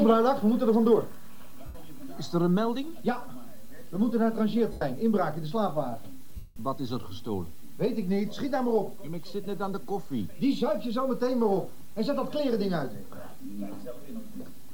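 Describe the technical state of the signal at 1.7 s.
At 1.7 s you're right inside a patch of lost LE Audio frames, running from about 1.66 to 1.75 s, so roughly 90 ms, which fits a dozen 7.5 ms LC3 frames dropping out. The decoder covers the gap by replaying the last good spectrum with its signs scrambled, then fading it after the first few frames. So instead of a clean gap you get a brief noisy smear where any tonal content loses its definition and washes out.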